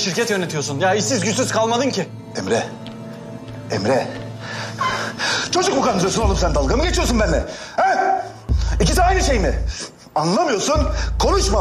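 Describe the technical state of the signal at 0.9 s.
At 0.9 s the signal is intact, with no audible fault at that point.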